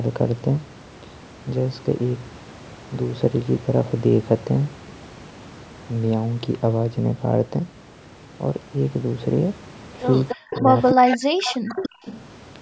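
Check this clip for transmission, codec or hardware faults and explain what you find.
Two related call faults cluster in the last two seconds of the speech.

Echo leak appears at 10.29–10.36, 10.52–11.17, 11.42–11.89 and 12.06–12.17 s. A copy of the far side returns 291 ms late, about 5 to 20 dB below the speech, likely because a loudspeaker echo canceller let part of it through. The fixed delay and separate copy set it apart from room reverberation.

Speech suppressed in double talk hits 10.34–10.72 and 10.94–12.05 s, overlapping the echo. The talker's level falls by up to roughly 40 dB, likely as the canceller turns everything down. It tracks the overlapping talk, unlike a random network dropout. The high-pass filtering and the 8 kHz band limit are ordinary call microphone processing.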